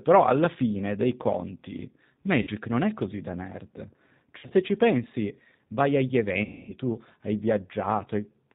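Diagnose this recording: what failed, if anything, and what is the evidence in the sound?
The whole recording sounds muffled and slightly rough, with a synthetic edge to the speech and nothing above 4 kHz. This is plainly audible G.729 codec damage at the codec stage, which points to an 8 kbit/s coder rebuilding speech from a vocal tract filter and sparse pulses.

At 2.41–2.49 s, 4.38–4.53 s and 6.44–6.74 s the speech smears into a buzzy tone or coloured noise that fades, and stays weak afterwards. These are network dropouts: VoIP packet loss concealed by the speech codec. About 50 ms is missing in the first event, and 80 ms spread over 120 ms in the second. The longest gap is about 250 ms at the third. For each gap, the decoder repeats its last pitch and filter at decaying gain.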